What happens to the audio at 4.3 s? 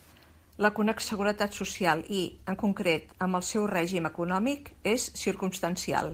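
Nothing goes wrong at 4.3 s; the speech carries on intact through that moment with no dropout, click or distortion.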